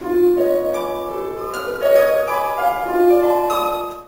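A recording of sounds with imaging from sample-and-hold upsampling throughout. A metallic fizz between 8 and 16 kHz, about 23 dB below the signal, tracks its level. This points to a 16 kHz source raised to 44.1 kHz by repeating samples without an anti-imaging filter.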